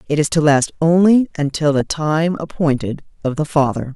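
Weak digital radio reception lets bit errors slip past error correction into the MP2 audio, causing DAB burbling from 1.76 to 1.93 s and again, heavier, from 3.50 to 3.67 s. Corrupted samples put short blips of noise into individual sub-bands over the speech.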